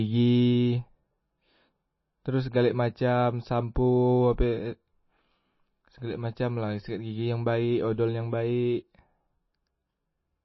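MP3 compression, throughout the speech from start to finish: the sound is plainly band-limited, with nothing above 5.8 kHz, so s sounds and breath lose their brightness. The damage is clearly audible, with a watery, swirling texture as weak frequency components drop in and out between frames. This points to an MP3 encoder starved of bits, likely running at a low bitrate around 24 kbps, which forces it to cut the treble and discard quiet detail.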